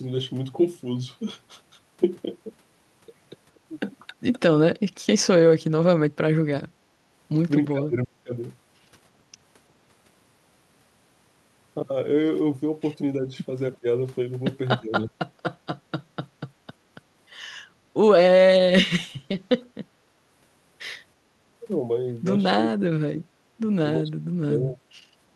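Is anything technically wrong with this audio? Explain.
Yes, there are two kinds of echo-canceller fault. Speech suppressed in double talk occurs at 4.07–5.27 s, 6.5–6.9 s, 7.68–8.33 s, 13.22–13.86 s, 14.79–15.17 s and 22.58–24.86 s. It was likely caused by the canceller mistaking the talker for loudspeaker echo while both sides spoke, and turning both down. The speech sinks, at worst by roughly 30 dB or more, for longest in the final stretch.

Background gated by the echo canceller occurs at 20.09–20.26 s. While far-end audio played, the canceller clamped the microphone, pulling the room sound down by about 10 dB for a brief moment before it let go and the ambience returned.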